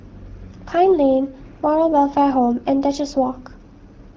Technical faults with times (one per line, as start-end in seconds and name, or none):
0.47-0.58 AMR bit errors